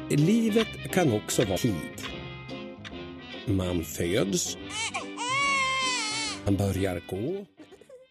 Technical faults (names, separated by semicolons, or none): compressed frames skipped